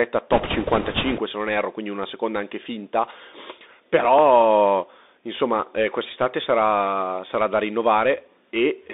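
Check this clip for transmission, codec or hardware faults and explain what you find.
Three faults are present in this speech clip: a narrowband Bluetooth headset codec throughout, a burst of bit errors near the start, and one dropped buffer.

The whole clip has passed through the Bluetooth CVSD headset codec, with its bandwidth confined to roughly 250 Hz to 3.7 kHz. CVSD sends one up-or-down bit per sample and adapts its step size, which fits a 64 kbps link. Here the damage is plainly audible. Sibilants turn scratchy, loud bright sounds smear where the step cannot keep up, and a granular hiss sits under the speech.

From 0.32 to 1.20 s, ending just before "se non erro quindi", there are bit errors on a Bluetooth voice link. The error rate is high, around 5 percent. Because each CVSD bit carries only a small, equal weight and errors decay quickly, corrupted bits do not produce sharp clicks. 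Instead the speech in that span is overlaid with a rushing, crackly noise that stops once the link recovers.

At 4.19 s there is a small forward jump in the audio, and no gap of silence. The likely cause is a dropped buffer (overrun), where the software failed to read a block before the hardware overwrote it. The two sides of the missing piece were then butted together. The loss is only a few milliseconds, so it is heard as a jump in the sound rather than a missing syllable.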